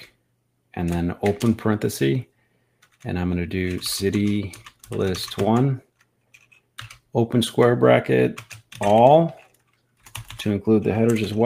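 Around 6.34 to 6.58 s there's sound cut by the noise suppressor: it mistook part of the audio for noise and pulled it down, by about 11 dB at worst. The affected sound sags in level, for roughly 0.15 s in total.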